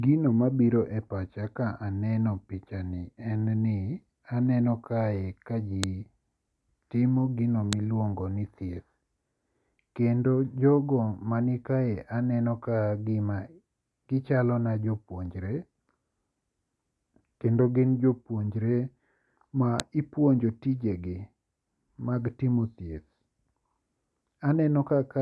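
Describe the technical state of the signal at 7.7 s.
File header played as audio at 7.73 s: a sharp, loud click snaps through the speech at that instant, lasting only about a millisecond. It comes from two separately encoded WAV pieces being joined without stripping the second one's header. The few dozen bytes of header data get interpreted as sample values and play out as a brief burst of meaningless amplitude. The click is unrelated to the speech level around it.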